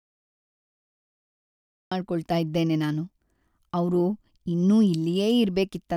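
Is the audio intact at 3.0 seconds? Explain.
Yes, at 3.0 seconds the speech runs on cleanly, with no dropout, click, distortion or other audible fault at that moment.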